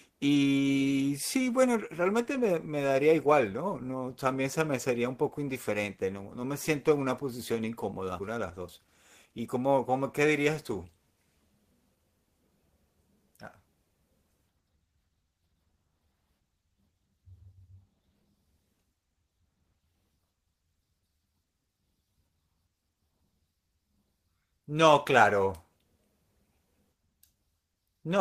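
A speech clip with two timing faults. At 8.19 s a skip ahead cuts out around 0.4 s of audio. The two sides of the jump are spliced directly with no fill, so the waveform shows an abrupt seam and the spectrogram shows harmonic tracks breaking off and resuming mid-pattern without any silence between. From 8.31 to 9.78 s a jitter buffer speed-up follows as the receiver trims its surplus delay. Speech runs at about 108% with pitch unchanged. Repeated removal of short pitch-period pieces takes out roughly 150 ms in total, which compresses syllables on the waveform while the spectrogram's harmonic spacing stays constant.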